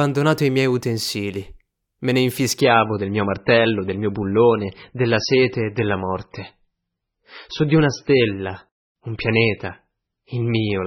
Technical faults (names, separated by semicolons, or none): adaptive stream at a lower bitrate